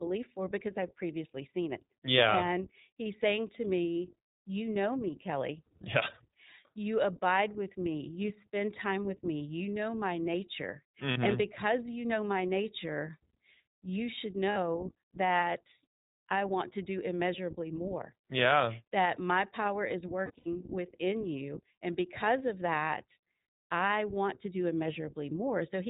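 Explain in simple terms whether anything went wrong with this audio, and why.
Yes, a couple of things went wrong. The whole speech clip has been through the iLBC codec, a phone-call style codec that throws away everything above 4 kHz, so the voice sounds muffled, a bit rough and slightly robotic all the way through.

There are also lost iLBC frames, where bits of audio never arrived and the decoder filled the holes by repeating the last bit of voice with some noise mixed in. You hear short buzzy, held-vowel blips about 40 ms long at 11.12 s, right after "know my nature", and at 14.52 s, after "you should". At 20.26 to 20.49 s, between "my power is" and "within you", several small dropouts are scattered over about a quarter of a second, the longest around 70 ms. The voice snaps back straight away each time.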